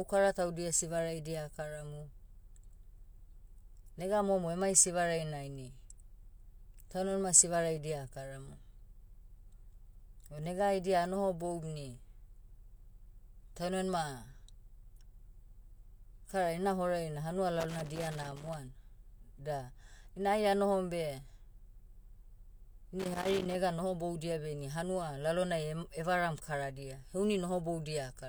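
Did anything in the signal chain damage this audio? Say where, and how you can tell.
Yes: irregular scratchy crackle bursts at 17.6–18.5 s, after "ina horai na hanua", and 23.0–23.55 s, before "nohoboudia beh ini hanua". That is loose connector crackle in the analogue wiring, a worn contact intermittently chopping the signal.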